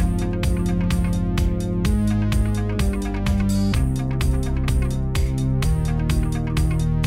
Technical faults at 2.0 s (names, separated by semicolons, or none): hard clipping